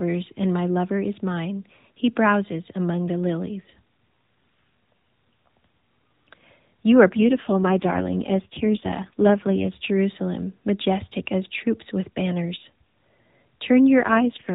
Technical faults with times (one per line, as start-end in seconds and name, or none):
7.10-9.73 AMR rate drop
13.98-14.54 AMR rate drop